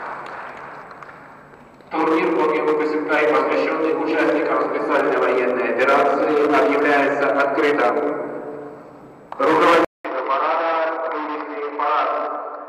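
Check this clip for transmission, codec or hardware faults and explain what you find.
One fault: at 9.85 s the sound drops out for about 200 ms, then returns roughly 10 dB quieter and noticeably duller, staying that way to the end of the clip. Nothing above 5.6 kHz survives, so the brightness and air are gone, and a faint new background noise sits well below the signal. The likely cause is the input switched to a poorer device: the system changed its input mid-recording, and the substitute has a narrower band, lower gain and its own noise floor.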